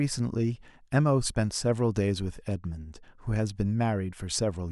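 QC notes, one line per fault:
Nothing to flag here; the speech comes across without a single problem worth writing up.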